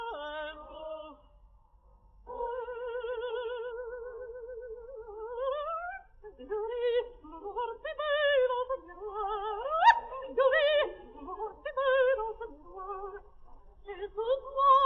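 No technical faults can be heard anywhere in this audio.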